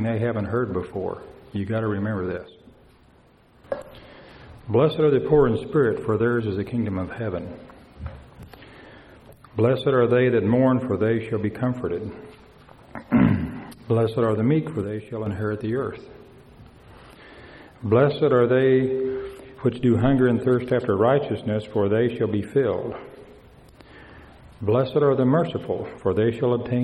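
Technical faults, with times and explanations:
2.38 to 3.64 s and 14.84 to 15.26 s, one channel drops out. The level falls abruptly by about 6 dB, holds there, then returns. The first dip lasts about 1.3 s and the second about 0.4 s. The likely cause is one stereo channel going silent. If both channels carried the same sound, the mono sum loses half its signal, which is exactly a 6 dB fall with no change in tone.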